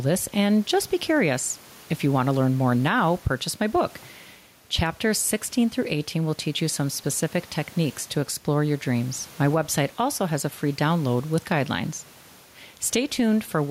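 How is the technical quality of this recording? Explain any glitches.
The recording suffers from gain pumping throughout. The input gain is likely set too high, so a fast limiter clamps down on each loud syllable. The room noise, about 32 dB below the speech, belongs to the room itself; the gain swings by around 5 dB, leaving the speech squashed.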